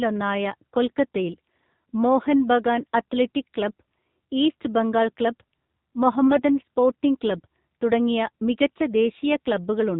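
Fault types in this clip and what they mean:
AMR narrowband mobile codec: Buzzy, synthetic-sounding speech with nothing above 4 kHz throughout, from a low-rate vocal-tract model; the clear damage fits the 7.4 kbps mode.
AMR bit errors: From 6.27 to 6.41 s, just before "സ്പോർട്ടിംഗ് ക്ലബ് തുടങ്ങിയ", speech turns briefly hoarse and gargly, as a few flipped, weakly protected bits misplaced excitation pulses.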